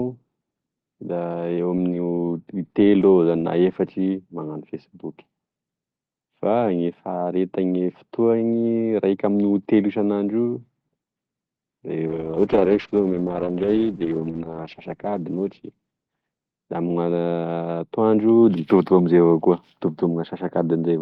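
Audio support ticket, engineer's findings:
Call bitrate drop, 12.08 to 17.87 s. Speech turns rough and muffled. Top end falls from 12 kHz to 8 kHz, worst for 2.41 s. Bandwidth estimate fell, starving the Opus encoder. Sound points to a drop from 32 kbps to 8 kbps.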